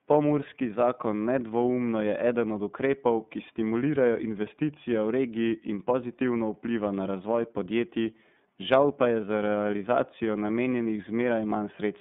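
The whole clip passed through the iLBC codec, a narrowband VoIP coder that handles each 30 ms frame on its own. The sound points to its 13.33 kbps mode, and the line is limited to roughly 150 Hz to 3.6 kHz. The coarse modelling of the excitation leaves the speech plainly rough and slightly synthetic throughout. The band limit takes away the airy top and the sibilance, so the voice sounds thin and telephone-like.

At 10.83 to 10.86 s, just after "pa je za realizacijo", packets went missing in lost iLBC frames. The gap fits a single 30 ms frame. To fill it, the decoder repeated the last pitch period blended with noise, which produces a brief held, faintly buzzy vowel-like sound in place of the real audio. Because each iLBC frame decodes independently, the speech is right again almost at once afterwards, with no lingering smear.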